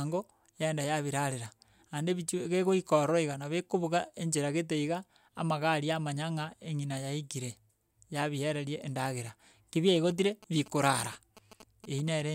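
GSM signalling bursts run from 9.96 s to 12.09 s. A nearby 2G phone is sending short groups of radio bursts, the kind it sends while a call or text is being set up, and the audio circuit rectifies that radio energy into sound. The result is a galloping dit-dit-dit of brief buzzes at about 217 Hz, the burst repetition rate, sitting roughly 20 dB below the speech and carrying on for just over two seconds.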